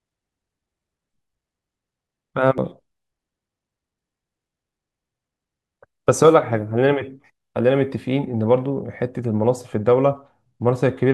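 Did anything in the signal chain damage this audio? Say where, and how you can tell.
Yes, at the codec stage: compressed frames were skipped at 2.58 s. The speech jumps ahead roughly 300 ms, which fits three dropped 92.9 ms frames.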